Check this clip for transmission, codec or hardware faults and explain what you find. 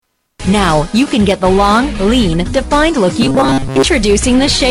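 One fault stands out, from 3.22 to 3.83 s: a robotic sound from repeated short buffers. For those 0.61 s the audio turns into a rigid, metallic buzz pitched at 134 Hz, flattening the natural movement of the sound while still loosely tracing its shape. The likely cause is audio arriving too late, so the playback side loops its last chunk of roughly 7.5 ms instead of waiting, and most of the real signal in that stretch is skipped.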